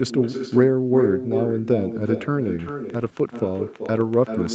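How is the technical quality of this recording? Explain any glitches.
The recording has three clear problems: a strong echo throughout, a run of clicks over the last part of the clip, and a short patch of packet-loss damage around 3 s. The audio is limited to 8 kHz, which fits a wideband Opus call.

Echo with no canceller runs through the whole clip. Every phrase is followed roughly 0.4 s later by a copy only about 7 dB quieter and thinner than the original. The far end is playing the call on a loudspeaker, its microphone picks that up, and nothing subtracts it before it travels back.

A train of clicks starts at 2.69 s and continues to the end of the clip at 4.55 s. The clicks come at about 5.7 per second with irregular spacing, and their peaks reach roughly the level of the speech itself. They tick through the pauses as well as over the speech. Repeated pulses of similar shape like these likely come from electrical interference or a faulty connection or power supply.

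A lost packet rebuilt from error correction occurs between 2.97 and 3.07 s. About 60 ms of audio was reconstructed from the low-bitrate backup copies that Opus carries inside the following packets, which fits three separate 20 ms frames. Because the copies filled the hole, there is no gap. That stretch sounds rougher and noisier than the surrounding speech, as a brief grainy patch.

A short concealed packet loss follows almost immediately, from 3.09 to 3.13 s. About 20 ms of audio never arrived in time. The decoder extrapolated from the preceding sound and then crossfaded back into the real signal. The result is a brief smear or wobble rather than a dropout. Coming right after the rebuilt section, it extends the degraded patch around 3 s.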